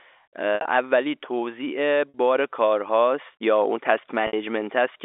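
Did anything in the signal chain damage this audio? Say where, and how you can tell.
Yes, in the network: packet loss with pitch repetition. At 0.55–0.65 s, 2.09–2.14 s and 4.27–4.33 s the sound briefly freezes into a held, buzzy tone that fades out. The receiver looped the last pitch period to cover 50 to 90 ms of missing packets.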